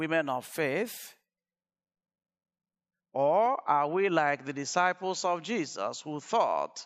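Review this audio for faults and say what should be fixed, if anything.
From 3.46 s to the end, the speech abruptly loses everything above 7.6 kHz and gains a faint new noise floor, at unchanged level, likely an input switched to a poorer device. Lock the recording input to one device so the system cannot reroute mid-session.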